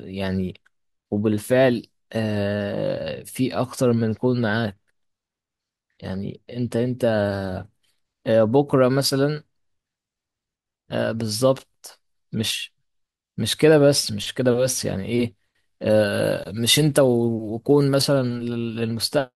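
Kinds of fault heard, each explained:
Pre-emphasis left on: from 15.9 to 18.02 s the speech has a treble lift that was meant to be undone by a matching de-emphasis stage, but that cut never happened. The boost rises steadily above the midrange, reaching about 11 dB at 10 kHz relative to 1 kHz, a slope consistent with the 50 µs FM curve. The result is thin, bright speech with exaggerated sibilance and harsh fricatives.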